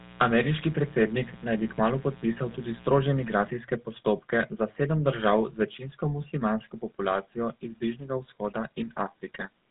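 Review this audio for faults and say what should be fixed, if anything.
The GSM full-rate codec rebuilds the vocal tract from sparse, regularly spaced excitation pulses and cuts everything above 4 kHz. Throughout the clip this leaves the speech plainly buzzy and gravelly, consistent with the 13 kbps full-rate coder. Route the call over a wideband codec instead.

Mains buzz from unshielded or switching circuitry leaks 60 Hz spikes and their harmonics into the signal. From 0 to 3.5 s, ending just before "postopke za sedem", this produces a raspy buzz roughly 20 dB under the speech. Shield and ground the input chain, away from dimmers and rectifiers.

GSM bit errors from a weak radio link corrupt the decoder's filter, pitch and gain values. From 9.34 to 9.47 s the speech breaks into squawks and gargling, which fits a handful of damaged frames. Improve signal strength or error protection on the link.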